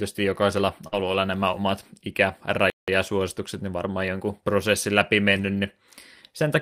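Speech clip with three kinds of transmission trouble. First, a burst of packet loss at 0.87 to 0.94 s, just before "nämä omat". For about 45 ms the receiver stretches the last bit of sound and fades it, so you get that held, thinning tail, and then about 40 ms is simply gone when the audio picks up further along. Right on top of that, from 0.92 to 1.14 s, comes a lost packet rebuilt from error correction. The following packets carried low-bitrate copies of the missing ones, so the decoder filled about 120 ms without a gap. That's why the stretch leading into "nämä omat" sounds rougher and grainier than what's around it. The span fits six 20 ms packets recovered this way. The same thing happens again at 5.37 to 5.47 s, right after "varmaan jonkun prosessin läpi". That's a shorter 60 ms stretch, which fits three packets, with the same coarse, noisy texture and no dropout. In between, at 2.70 to 2.88 s, there's a playback stall. 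The output just goes silent mid-flow for about 178 ms and then carries on. That's most likely the player running out of buffered data or its audio thread getting blocked briefly.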